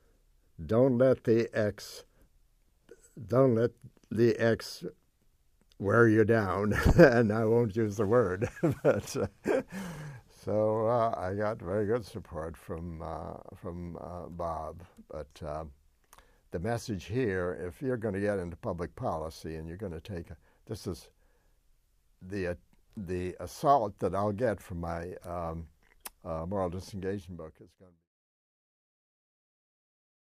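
No technical faults are present.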